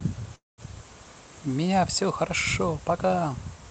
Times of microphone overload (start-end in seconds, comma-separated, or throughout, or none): none